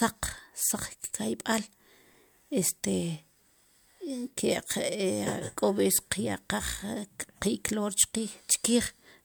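Nothing in the speech stood out as a technical fault on listening.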